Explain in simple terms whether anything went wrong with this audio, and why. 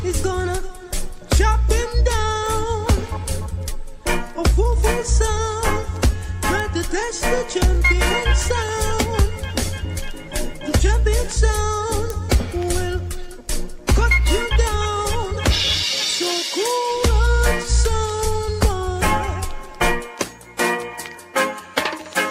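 Word clock ticks run from 1.08 s to 21.76 s: a sharp tick repeats about every one and a half seconds, roughly fifteen times. Two connected devices kept slightly different time, and each slip dropped or doubled one sample. Unlike random clicks, these keep a steady beat.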